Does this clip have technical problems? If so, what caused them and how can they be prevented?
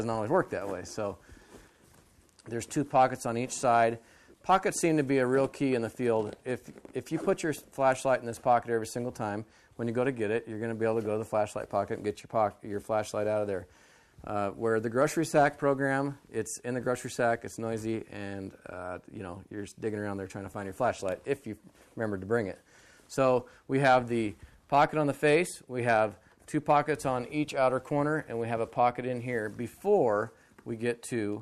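No, nothing technical gets in the way here, so there's nothing that needs preventing.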